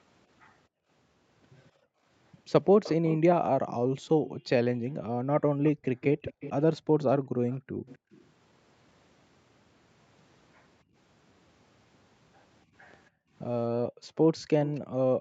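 From 0.68 to 2.06 s, 3.83 to 5.85 s, 6.81 to 8.11 s, briefly at 10.84 s, and from 13.1 s to the end, the background is gated by the echo canceller. The room sound ducks by about 33 to 40 dB (about 21 dB at 10.84 s) while far-end audio plays, then returns.

Overlapping this, an echo leak appears from 2.83 to 4.31 s, 5.65 to 8.24 s, and around 14.65 to 14.8 s. A copy of the speech trails by about 255 to 266 ms at roughly 15 dB down, likely loudspeaker pickup that the canceller failed to remove.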